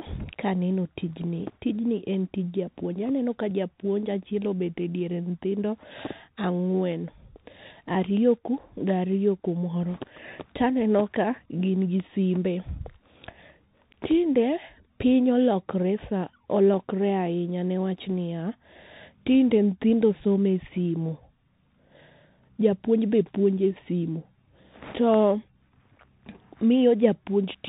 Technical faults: Bluetooth CVSD headset codec

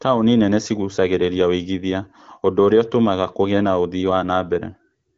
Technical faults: none

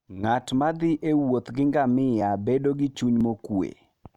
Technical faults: overlap between stream segments

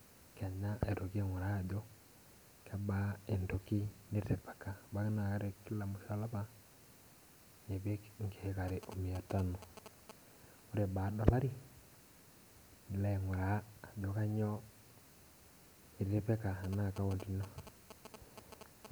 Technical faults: GSM signalling bursts

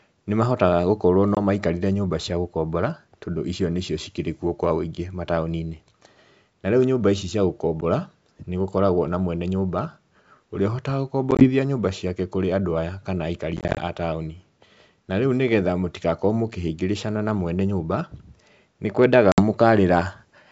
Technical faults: packet loss on an ADPCM call

